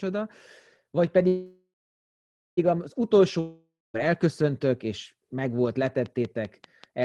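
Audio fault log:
1.27–2.59 s, call audio freeze: the speech stops and the last sound stretches into a fading buzz, then about 0.88 s of near-silence, and resumes exactly where it left off. Likely packets held up in transit emptied the jitter buffer. Unlike a dropout, nothing is skipped; 1.3 s of delay is inserted.
3.40–3.96 s, long network dropout: the last sound is extended as a decaying hiss, followed by about 0.23 s of silence, and the speech returns at "elköszöntök és megvolt" with roughly 0.54 s of it gone. The likely cause is audio that never arrived. Unlike the freeze, the speech jumps ahead rather than picking up where it stopped.
5.87–7.04 s, train of clicks: after "elköszöntök és megvolt", similar sharp ticks arrive at a steady 5.2 per second, peaking about 5 dB above the speech and continuing through pauses. Likely interference from nearby equipment or a faulty connection or power supply. 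The regular spacing and matching shape set them apart from random crackle or codec glitches.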